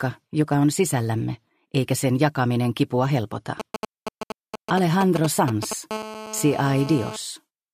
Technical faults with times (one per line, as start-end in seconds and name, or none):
3.60-5.73 GSM signalling bursts
5.91-7.16 GSM phone buzz